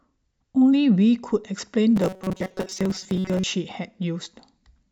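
From 1.96 to 3.46 s, new audio likely arrived too seldom, so playback looped a short buffer and skipped most of the real speech. The result is robotic sound from repeated short buffers: a rigid, metallic 188 Hz buzz, fitting a buffer near 5.3 ms, loosely tracking the speech.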